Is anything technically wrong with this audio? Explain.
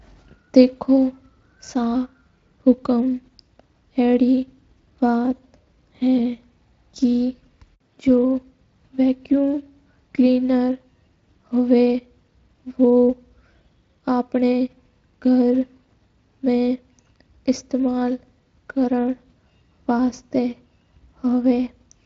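No, nothing is technically wrong.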